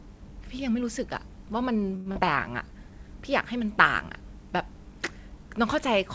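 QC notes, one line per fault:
1.96 to 2.08 s, short stall from a late packet: a packet turned up late, the jitter buffer ran dry, and the receiver held the last sound for about 96 ms until it arrived. Nothing's lost, but that sound hangs on too long with a slight buzz or dip.
2.12 to 2.17 s, short concealed packet loss: about 80 ms of audio never made it, and the receiver patched roughly 36 ms of it by carrying the last sound forward, then blending back. You get a quick smear or wobble, and a short consonant can drop out.
2.26 to 3.04 s, jitter buffer slow-down: the buffer was rebuilding its reserve, so it repeated single pitch periods and bits of pauses, adding about 62 ms. The speech plays at about 93% speed with the pitch unchanged, so sounds get drawn out, maybe with a slight warble.
Throughout, the call codec path is audible as nothing above 8 kHz, which fits G.722.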